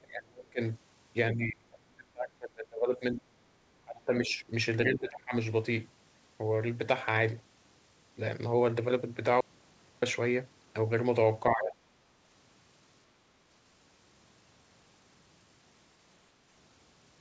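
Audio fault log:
0.02–0.6 s, 1.33–3.31 s, 3.82–4.44 s, 4.91–5.34 s, 11.53–11.77 s: speech suppressed in double talk. The echo canceller likely mistook overlapping far-end talk for echo and clamped the near-end path. The voice ducks by about 30 dB early on, easing to about 15 dB by 11.5 s.
9.41–10.02 s: audio dropout to a faint residue. The signal feed was likely lost for about 0.62 s while the downstream path stayed open. The sound cuts out abruptly, leaving only hiss about 35 dB below the signal, then snaps back.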